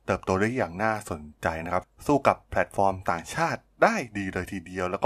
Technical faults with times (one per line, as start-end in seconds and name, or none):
none